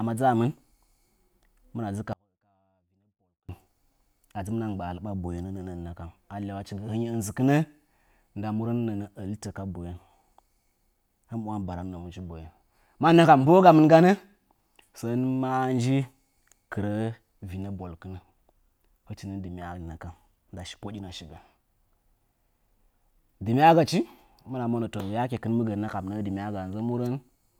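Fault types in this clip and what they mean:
Audio dropout to a faint residue: the speech cuts out abruptly at 2.13 s and returns just as suddenly at 3.49 s, leaving a 1.36 s gap in which only a faint trace of the signal remains, roughly 40 dB below its normal level. The likely cause is a brief loss of the feed while the downstream path stayed live. On a waveform the envelope collapses to a thin sliver with square edges. On a spectrogram the band turns nearly blank between two sharp vertical boundaries.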